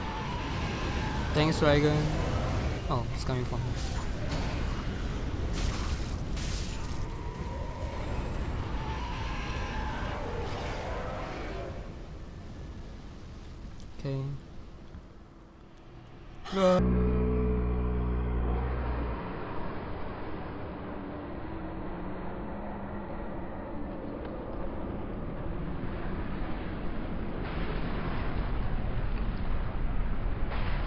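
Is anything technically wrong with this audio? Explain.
Yes. From 16.79 s to the end there's a wrong sample rate fault: the sound plays at one third speed and drops about 19 semitones, which fits 48 kHz material played at 16 kHz without conversion.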